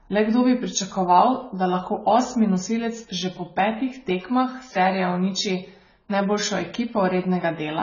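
Speech, with AAC compression audible throughout: nothing is left above 7 kHz, and the remaining sound is dull, smeared and warbling on sibilants. This heavy damage likely comes from AAC-LC at a very low bitrate, around 16 kbps. Simple low-pass filtering would leave no such fizzy, shifting texture.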